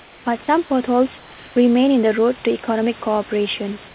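From 0.00 to 0.26 s and again from 1.18 to 1.56 s, the room background gives way to steady, featureless hiss about 3 dB and 2 dB quieter, likely comfort noise in place of the background during transmission pauses. A spectrogram shows smooth, textureless bands there.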